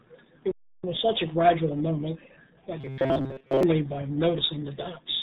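A speech clip carrying the RealAudio 14.4 codec throughout. Nothing passes above 4 kHz. The speech sounds muffled and gargly, with heavy coding damage. That fits the 8 kbit/s dial-up codec, built to squeeze speech through a modem. From 2.81 to 3.63 s the speech turns into a rigid, metallic buzz at 133 Hz. It still loosely tracks the speech. This is robotic sound from repeated short buffers, likely caused by audio arriving too late. The player loops a slice of about 7.5 ms, skipping most of the real sound.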